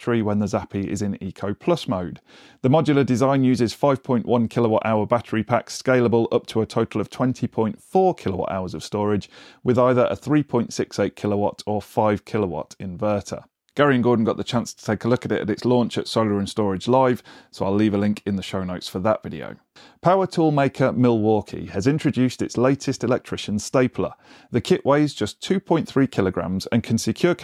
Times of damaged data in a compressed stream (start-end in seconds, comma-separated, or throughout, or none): none